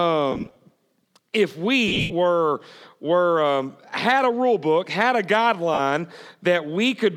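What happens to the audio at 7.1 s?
Nothing goes wrong at 7.1 s; the audio runs on intact there, with no break, click or distortion.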